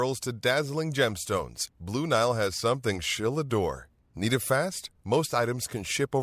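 A short bit of speech, and there's nothing technically wrong to point to anywhere in it.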